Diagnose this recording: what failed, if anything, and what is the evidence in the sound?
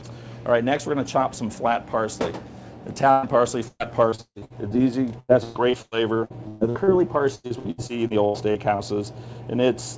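The network dropped a burst of packets at 3.11 to 3.26 s. About 120 ms of audio is missing there. The receiver covered the hole by carrying the last bit of sound forward and fading it down, so you hear a brief smeared hold. Then the audio picks up later than it should, with that stretch gone. The band stops at 8 kHz, which fits a wideband call codec around 64 kbps.

The bigger problem is repeated packet loss with a robotic sound, again at the network stage. It comes in three stretches: 3.68 to 4.81 s (8 gaps, longest 145 ms), 5.20 to 6.90 s (8 gaps, longest 125 ms), and 7.35 to 8.82 s (9 gaps, longest 91 ms). Concealment fills roughly 30 to 39 percent of each stretch. The patches land so close together that the sound turns choppy, with chunks missing.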